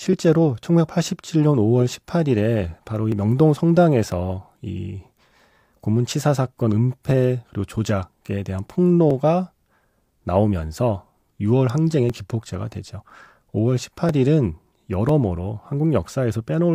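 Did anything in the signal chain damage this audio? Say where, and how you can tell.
Yes. Periodic USB or driver dropouts run through the speech from about 0.13 s to 16.09 s, with a tick recurring almost exactly every 1.00 s, about fifteen in all. The fault sits at the driver or USB transfer stage. Something blocks the audio path on a fixed one-second schedule, and roughly a millisecond of samples is skipped outright rather than padded with silence. The splice leaves a short discontinuity, heard as a regular click under the speech.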